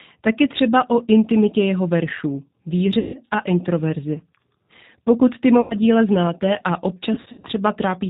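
Czech speech carried through the G.729 codec at 8 kbit/s. Nothing above about 4 kHz survives, but unlike a plain telephone band-limit the voice also sounds rough and faintly synthetic. The codec rebuilds each 10 ms frame from a vocal-tract filter, a pitch predictor and a handful of pulses, so the damage is plainly audible as a grainy, buzzy texture rather than just muffling. VoIP packet loss concealed by the speech codec appears three times. From 2.99 to 3.19 s, right after "o intimitě jeho veršů" and before "a introverzi", about 150 ms of audio is missing. From 5.61 to 5.76 s, just before "díla znáte a", 90 ms is gone. From 7.14 to 7.45 s, after "díla znáte a", 180 ms is lost in scattered runs of up to 60 ms. These are not clean dropouts to silence. The decoder keeps extending the last pitch and filter, so each gap becomes a stretched buzzy tone or coloured noise that fades, and the voice stays weak or distorted for a moment after the stream resumes.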